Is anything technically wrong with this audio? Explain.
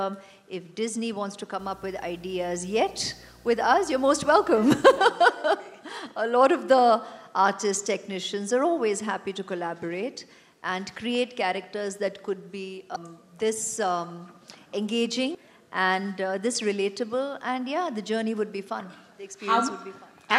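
Yes, two things. From 1.59 to 4.98 s there's video or display buzz: a screen or video cable leaking into the audio, giving a 60 Hz field-rate buzz with hash on top, sitting well below the main sound. Then at 12.95 s and again at 15.34 s there's damaged data in the compressed stream, where corrupted frames throw the decoder out of sync, and each one comes out as a short glitch.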